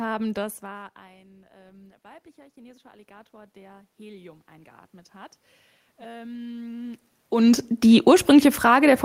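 Automatic gain rising runs from 0.63 to 5.42 s in this speech clip. After the talker moves away around half a second in, the input falls by about 24 dB, and the control slowly adds about 10 dB, swelling voice and room noise together. It climbs again from 5.97 s to the end.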